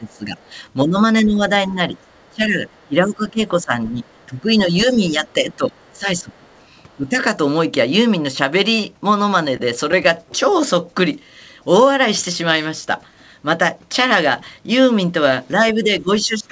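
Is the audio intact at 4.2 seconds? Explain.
No. At 4.2 s the speech sits inside a stretch of speech suppressed in double talk that runs from 0.0 to 7.17 s. The likely cause is both sides talking at once. The echo canceller cannot tell this talker apart from the loudspeaker echo, so it turns everything down. The voice dips by up to about 15 dB, thins or breaks up. About four seconds of the span are affected in total.

The same moment also carries the other side's voice leaking through, from 4.04 to 4.26 s. The talker's device plays the far end on a loudspeaker, and some of it is likely reaching the microphone uncancelled. This short scrap is very faint, around 40 dB below the speech. It sits under a band that stops at 8 kHz, as a G.722 call path would.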